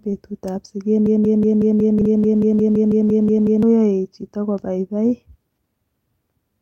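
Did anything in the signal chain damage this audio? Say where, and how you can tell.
Yes. A broken-record loop runs from 1.06 to 3.63 s: a fragment of about 184 ms repeats 16 times, back to back and identical each time. This is likely a stalled player or stream at the playback or buffer stage, resending the last piece it held while the audio meant for that span is lost.

A skip ahead at the network or jitter-buffer stage occurs at 2.01 s. Roughly 300 ms of audio is missing, and the two sides are butted together with no filled gap. This fits a buffer dropping audio while later packets were already queued.

Jitter buffer speed-up runs from 2.56 to 2.90 s. The sound plays at about 115% speed with its pitch unchanged, so it sounds hurried. The receiver trimmed roughly 70 ms in short pitch-period slices to drain an overfilled buffer and cut its delay.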